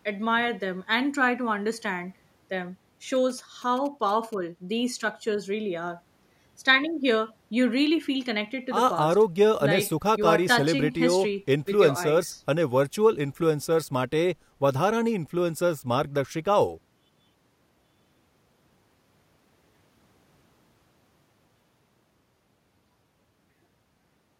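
GSM signalling bursts run from 3.16 to 4.34 s. A nearby 2G phone transmitting short signalling bursts gets rectified by the audio circuitry, producing a galloping dit-dit-dit of brief 217 Hz buzzes sitting roughly 25 dB beneath the speech.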